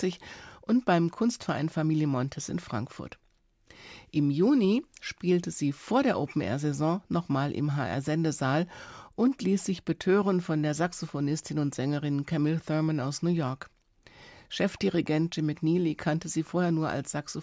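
Nothing in the speech here counts as a technical fault, so there's nothing to flag at any point along the way.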